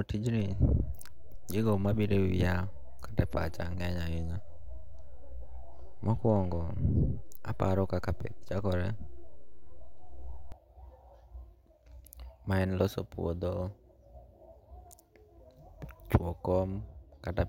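At 0.40 s the speech is hit by a DC step. The waveform's zero line suddenly jumps by about -35 dBFS. The whole signal rides on that offset, as if a biased input had been switched in. The jump itself is heard as a low thump. The offset holds until 10.52 s. Throughout, the speech carries on unchanged.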